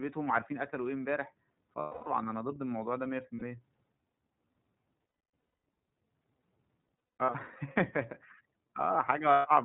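The whole speech clip runs through the iLBC codec. It's band-limited to 4 kHz with a plainly audible rough, synthetic edge. Each frame is coded on its own, and the roughness fits the 13.33 kbps mode with 30 ms frames.

Lost iLBC frames show up at 1.79 to 2.08 s, 3.36 to 3.42 s, 5.20 to 5.66 s, 6.81 to 7.35 s and 9.33 to 9.48 s. Each gap is covered by a repeated pitch cycle mixed with noise, which sounds like a held, buzzy vowel. The two middle stretches are scattered dropouts, the longest run around a third of a second. Recovery is almost instant after each one.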